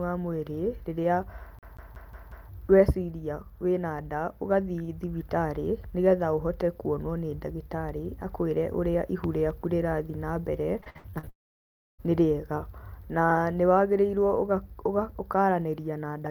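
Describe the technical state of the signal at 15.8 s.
At 15.8 s the signal is intact, with no audible technical fault at that moment.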